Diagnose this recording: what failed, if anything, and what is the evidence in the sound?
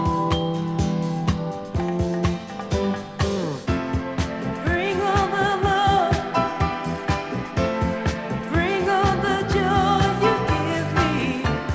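Nothing failed at any stage between capture and playback. No event in the sound points to a broken link in the chain.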